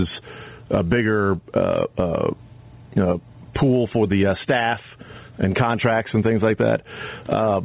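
Gain pumping runs through the whole speech clip. The gain swings by around 15 dB, so quiet and loud passages sit unnaturally close in level and the sound feels squashed. The likely cause is input gain set far too high, with a fast limiter or compressor clamping down on every peak. Above all this, nothing reaches past 4 kHz, which points to a narrowband telephone codec on the call path.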